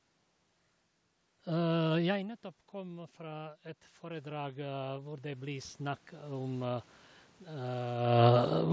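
From 2.07 to 6.95 s there's automatic gain rising: the talker drops about 16 dB, and the AGC slowly adds about 12 dB, swelling voice and room noise together.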